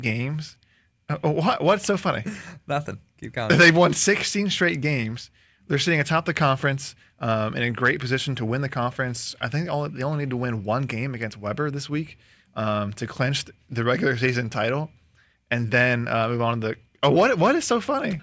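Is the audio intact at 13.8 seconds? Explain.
Yes, the audio is intact at 13.8 seconds, with no audible fault at that moment.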